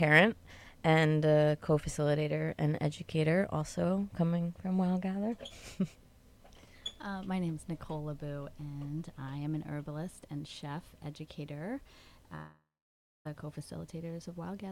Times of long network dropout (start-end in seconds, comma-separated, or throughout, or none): 12.35-13.27